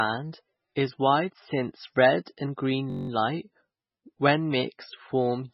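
Right from the start the speech is watery and swirly, with nothing above 5.6 kHz, most likely heavy MP3 compression at a very low bitrate starving the treble. At 2.90 s a system hang loop hits, the same 21.3 ms snippet repeating nine times until 3.09 s, a 47 Hz buzz that fits a 1024-sample buffer.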